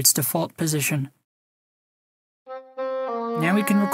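No technical faults can be heard anywhere in this audio. There is nothing in the sound that calls for a timed description.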